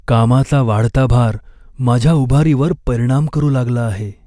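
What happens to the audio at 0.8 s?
Nothing goes wrong at 0.8 s; the speech plays through intact at that moment.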